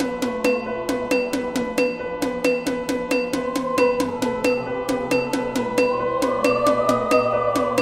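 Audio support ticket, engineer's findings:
No faults found on listening; nothing to report in this ticket.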